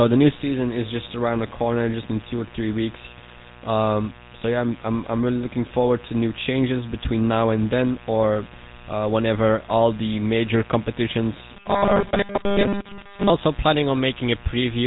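It's a speech recording with two problems running the whole way through. There's a steady, raspy mains buzz sitting about 20 dB under the speech. The 60 Hz spacing points to sharp switching spikes, maybe from a dimmer, a rectifier or a missing shield, spraying harmonics well up the spectrum. On top of that, the speech has the gravelly, buzzy roughness of the GSM full-rate codec, which fits the old 13 kbps mobile codec. Its pulse-driven vocal-tract model clearly smears the voice, and nothing survives above about 3.8 kHz, so everything sounds muffled.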